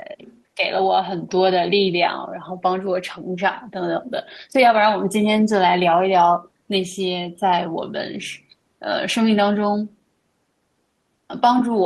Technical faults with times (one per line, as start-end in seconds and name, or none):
0.26-0.42 other side's voice leaking through
0.56-0.63 speech suppressed in double talk